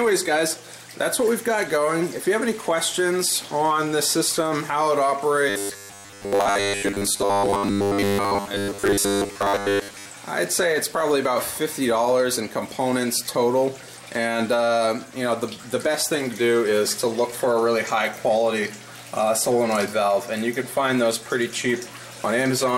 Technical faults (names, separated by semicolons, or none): robotic sound from repeated short buffers